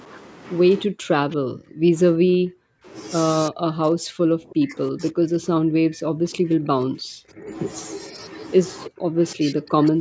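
The speech dips sharply, by about 40 dB at worst, from 0.86 to 1.95 s, 2.12 to 2.87 s, 3.5 to 7.51 s, and about 30 dB from 8.88 s to the end. This is likely speech suppressed in double talk: the echo canceller, unable to separate this talker from the far side, turned everything down. Around 1.3 s, a faint copy of the voice about 30 dB down returns 319 ms late. That is likely an echo leak, loudspeaker sound the canceller missed.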